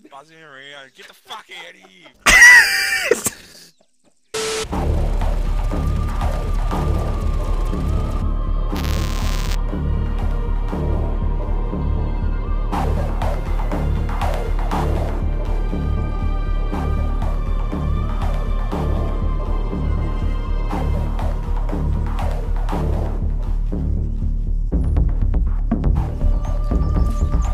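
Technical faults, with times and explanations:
8.75 to 9.55 s, buffer tearing: for just under a second the sound picks up a gritty, robotic buzz at 200 Hz. The program filling the ring buffer and the hardware reading it have slipped out of step, so they cross inside every period. That points to a period of about 5 ms. A small sliver of each buffer still holds audio from around 10 ms earlier, and the hard joins on either side repeat at the buffer rate, riding on the signal as that rattle.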